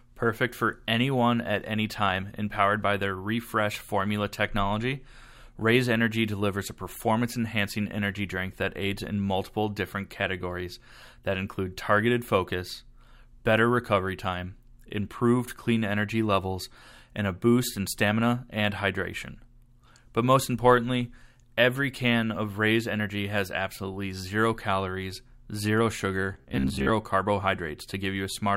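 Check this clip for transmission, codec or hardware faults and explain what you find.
One fault appears near the end. From 26.34 to 26.89 s the speech collapses into a rigid, metallic buzz pitched at 66.7 Hz, still loosely tracking the speech contour. This is robotic sound from repeated short buffers, likely caused by audio arriving too seldom so the playback side repeats the last chunk while real material is dropped. A 66.7 Hz drone fits a 15 ms repeated block, with around half the stretch filled by repeats.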